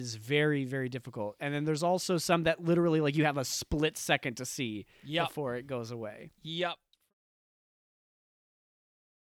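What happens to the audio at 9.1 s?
At 9.1 s the audio is intact, with no fault to be heard at that moment.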